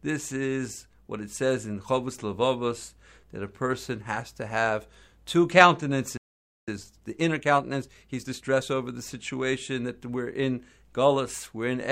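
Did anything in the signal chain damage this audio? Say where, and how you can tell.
Yes. A playback stall silences the speech from 6.17 to 6.68 s, a flat gap in the waveform; a starved or blocked playback buffer is the likely cause.

Time-compressed catch-up follows from 6.68 to 8.68 s: the player splices out short cross-faded slices, running 1.25 times fast. Syllables crowd together on the spectrogram while harmonic spacing, and so pitch, stays unchanged.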